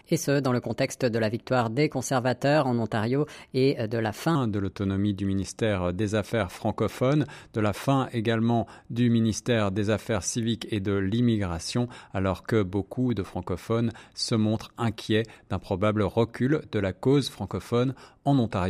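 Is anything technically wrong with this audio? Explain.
Yes. A section at the wrong speed runs from 0.00 to 4.35 s: the speech plays about 1.17 times too fast, likely from being fitted to a mismatched clock, so pitch rises by about three semitones and the voice sounds hurried and high before dropping to normal.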